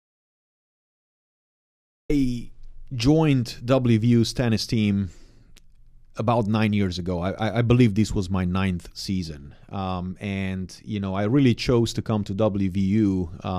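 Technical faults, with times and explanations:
0.00–2.10 s, audio dropout to silence: the clip opens in silence, with no room tone at all, and the speech enters abruptly at 2.10 s. The input signal was likely lost while the recorder kept writing silence, so nothing from that stretch survives.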